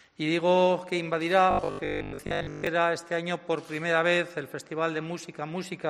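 From 1.51 to 2.67 s the sound turns into a rigid metallic buzz at 50 Hz: robotic sound from repeated short buffers, likely 20 ms chunks repeated through most of that stretch.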